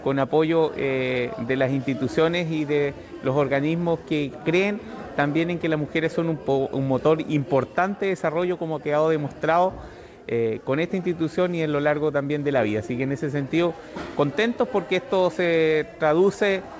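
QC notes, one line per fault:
The signal shows no faults, only the bandwidth of a call path with nothing above 8 kHz, which fits a wideband codec such as G.722 at 64 kbps.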